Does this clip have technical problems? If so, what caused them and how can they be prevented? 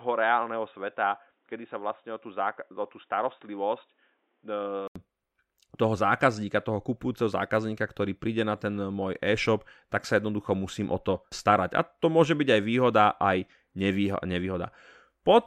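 Yes. From 0.0 to 4.96 s the speech is dull and boxy, with nothing above 3.8 kHz, a few decibels quieter, and a faint added noise floor. An 80 ms gap then precedes fuller sound, likely an input switched to a poorer device, such as a headset call profile, for the opening. Locking the recording input to one fixed device and disabling automatic switching prevents this.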